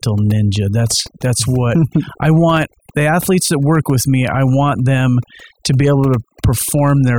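Overdone noise removal runs through the whole speech clip. A noise reducer set far too aggressively pulls individual frequency bands down whenever they sit close to its noise estimate, so the background drops and breaks up into twinkling specks, while softer parts of the voice are stripped away.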